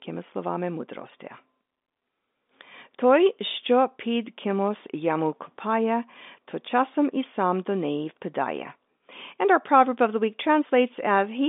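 Nothing stood out on listening to this speech, which comes through the telephone line band of roughly 250 Hz to 3.6 kHz with nothing heard above about 3.7 kHz.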